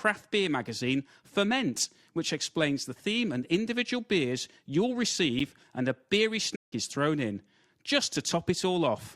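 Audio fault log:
5.4 s, gap between stream segments: right after "and individual beers you'll" the speech drops out for about 10 ms, with hard edges on both sides, before "and a beery" carries on. Two consecutive pieces of the stream, which fits 2-second segments, were timed with a small hole between them, and the player filled that hole with silence. Nothing is missing from the speech. What separates it from a stall is how short and clean the hole is, more a tick than a pause.
6.55–6.73 s, playback stall: after "and a beery" the output goes silent for about 160 ms, then resumes with "is thrown in just". This is long enough to hear as the speech stopping mid-flow rather than as a click, and it picks up from where it left off. The likely cause is the player briefly running out of data or having its audio thread blocked until it recovered. It differs from the segment gap in length, and it sits at no boundary between stream pieces.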